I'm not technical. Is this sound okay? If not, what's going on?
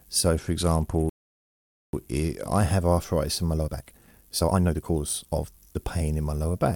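No. From 0.35 to 2.62 seconds there is a Bluetooth SBC bit pool drop. The wireless link was busy, so the phone squeezed the sound into fewer bits. The highs go dull and gritty. It clears just before "have arthritis in my".

Inside that stretch, from 1.09 to 1.93 seconds, there is a playback stall. The sound stops dead for about 0.84 seconds, then carries on. The likely cause is the player running out of data for a moment.

From 3.55 to 5.79 seconds, right after "have arthritis in my", comes a time-stretched section. The speech suddenly runs about 1.74 times faster, but the pitch stays the same. It sounds rushed. Likely, software squeezed it to fit a shorter length.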